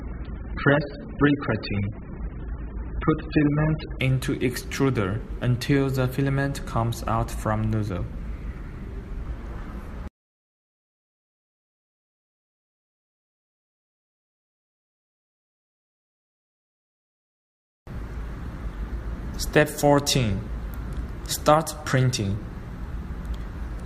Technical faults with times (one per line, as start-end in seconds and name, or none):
0.00-4.00 adaptive stream starting at a low bitrate